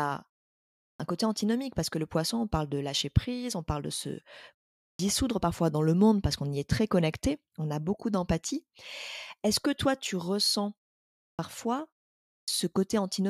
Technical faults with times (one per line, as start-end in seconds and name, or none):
0.95-1.00 clipped start after a pause
4.95-4.99 clipped start after a pause
11.34-11.39 clipped start after a pause
12.43-12.48 clipped start after a pause